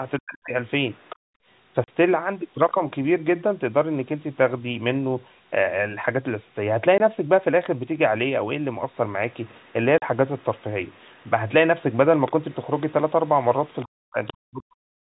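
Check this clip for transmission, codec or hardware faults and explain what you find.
Four kinds of fault can be heard, all from the call path rather than the recording itself.

Speech suppressed in double talk: from 0.19 to 0.54 s and from 13.85 s to the end, the speech sinks by roughly 40 dB. This is likely the echo canceller turning down both talkers at once.

Other side's voice leaking through: a faint second voice appears at 0.68–1.16, 9.31–9.73, 10.38–11.30, 11.92–12.92 and 13.80–14.33 s, roughly 20 to 40 dB under the speech. This is likely loudspeaker echo the canceller missed.

Background gated by the echo canceller: from 1.16 to 1.46 s the room sound drops by about 34 dB. It returns once the canceller releases the microphone.

Packet loss filled with silence: there are hard-edged holes at 1.84 s (40 ms), 6.98 s (20 ms) and 9.98 s (40 ms). Lost packets were replaced with silence, and the hole lengths fit 20 ms packets.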